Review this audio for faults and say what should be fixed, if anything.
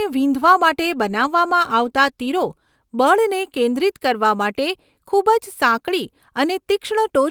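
Nothing to fix: no faults are audible anywhere in the speech.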